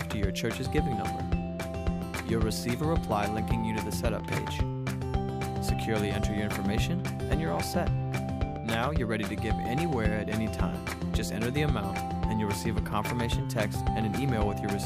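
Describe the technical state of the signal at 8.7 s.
At 8.7 s the signal is intact, with no audible dropout, distortion, glitch or other technical fault.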